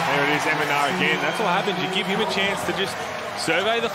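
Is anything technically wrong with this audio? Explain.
No, nothing technically wrong.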